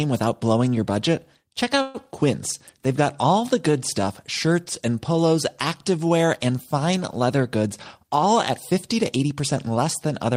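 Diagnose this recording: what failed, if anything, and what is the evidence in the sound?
At 1.81 to 1.96 s the speech stalls into a fading buzz for about 130 ms, then resumes intact: likely a call audio freeze, with the jitter buffer running empty.

From 8.03 to 9.67 s the speech runs 6% fast at unchanged pitch: a jitter buffer speed-up, trimming pitch periods to shed roughly a tenth of a second.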